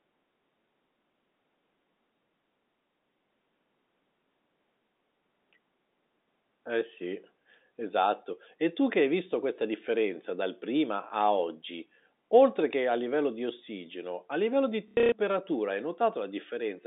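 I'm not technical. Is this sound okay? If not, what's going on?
No. At about 14.9 to 15.1 seconds, just after "ossigeno a livello di", there is packet loss with last packet repeated. Bits of the audio went missing in transit. The receiver filled each gap by replaying the last piece it had. You hear a brief robotic stutter, the longest stretch lasting about 0.12 seconds.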